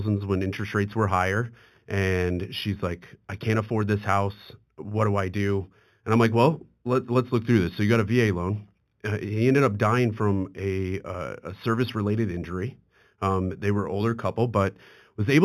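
Throughout the speech, sibilants carry a faint metallic shimmer over a dulled top end. This is imaging from linear upsampling. Straight-line interpolation, consistent with raising 8 kHz audio to 48 kHz, leaves a mirrored copy of the spectrum between 4 and 8 kHz, roughly 30 dB down.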